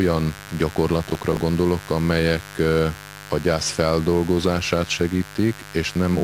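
A mains buzz runs under the speech from start to finish, roughly 20 dB below it. Sharp switching spikes at twice the 50 Hz mains rate spray harmonics into the kilohertz range, so it sounds raspy and edgy rather than the smooth, low tone of plain hum.

From 1.10 to 1.41 s, processor overload crackle tears across the speech. The processor missed several buffer deadlines in a row, and each miss replayed a fragment of old audio with hard edges. The spacing fits buffers of around 10 ms. Unlike a single dropout click or the continuous buzz, this gritty burst clusters tightly and stops once the load passes.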